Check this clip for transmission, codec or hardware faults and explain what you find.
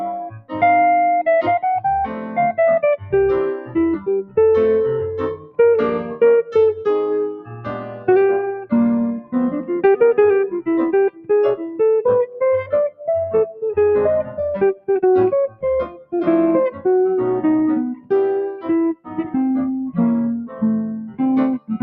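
A speech-oriented noise suppressor has been left running on this sound, and it causes the faults here. Throughout, the level swings by about 10 dB: onsets punch through while sustained parts and tails sag and flutter. This is a noise suppressor applied to music or sounds. It treats steady tones and ambience as noise to remove.

There is sound cut by the noise suppressor at 0.11–0.55 s, 2.07–4.37 s, 5.36–9.34 s, 11.1–16.86 s, 17.96–19.17 s and 20.47–21.75 s. Held and decaying portions drop sharply, by about 13 to 21 dB at the deepest, with the longest losses around 11–17 s. The suppressor misjudged these stretches as noise and clamped them down.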